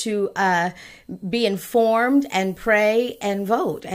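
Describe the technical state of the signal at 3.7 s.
At 3.7 s the speech is inside a stretch of low bit depth with noise shaping running from 1.75 to 3.80 s. The coarse rounding, which fits about 9 bits, has its error pushed upward, so a steady, thin hiss roughly 30 dB below the speech rises sharply toward the top of the band. Plain truncation would instead give a flatter, grittier noise that follows the signal.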